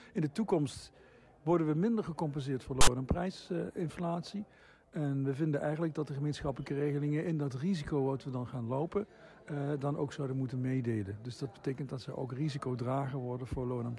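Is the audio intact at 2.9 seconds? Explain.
Yes, but only just. A loud, hard-edged rasp of static, pushed off to one side, runs from 2.81 to 2.87 s and stops a few hundredths of a second before 2.9 s. This is file tags played as audio. A block of text tag data was decoded as if it were sample values, so the character bytes became a harsh, lopsided buzz with abrupt starts and stops instead of real signal.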